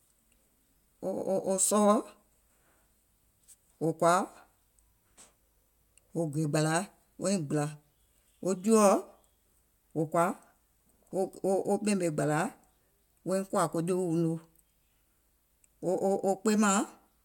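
No technical faults can be heard in this speech recording. There is no moment in it that stands out as a problem to mark.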